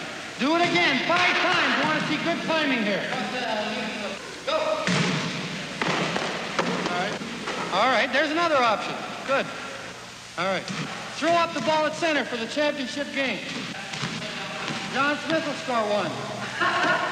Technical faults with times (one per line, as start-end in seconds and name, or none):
none